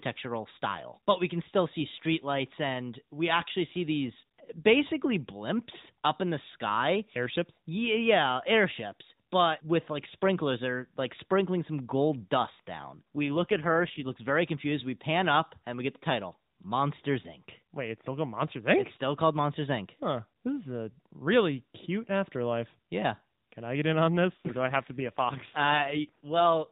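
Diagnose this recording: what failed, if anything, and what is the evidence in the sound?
AMR rate drop at the network and codec stage, 12.96–14.15 s and 24.36–26.70 s. The speech turns buzzier and more synthetic with no gap, which points to a weak link forcing 12.2 down to roughly 5.9 kbps. A spectrogram shows smeared harmonics below an unchanged 4 kHz ceiling. The waveform stays continuous.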